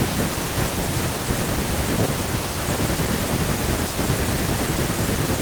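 No technical fault can be heard anywhere in the speech. There is nothing to mark at any point in time.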